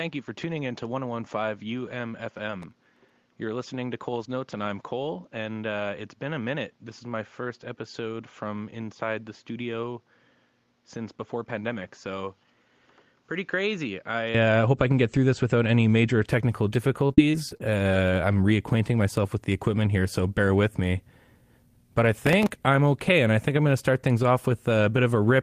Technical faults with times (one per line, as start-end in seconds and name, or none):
0.00-14.35 input switched to a poorer device
2.62-3.10 processor overload crackle
17.07-17.75 repeated packet loss (robotic sound)
22.22-22.49 processor overload crackle